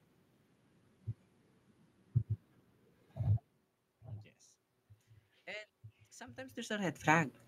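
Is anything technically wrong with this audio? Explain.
Yes. From 6.17 s to 7.41 s there is an automatic gain rise. The level arriving at the microphone drops by about 23 dB, around the point where the talker moves back at roughly 6.5 s, and the automatic gain control responds by slowly raising its gain by about 5 dB. The speech and the room noise swell together over that second or so. This separates it from a talker simply moving, as near 3.5 s, where only the voice level changes and the background stays put.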